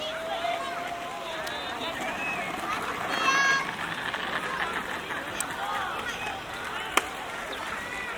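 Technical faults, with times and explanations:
1.47 s and 5.41 s, electrical switching spike: two sharp snaps sitting on top of the sound, the second a bit louder, likely a nearby switch arcing into the line.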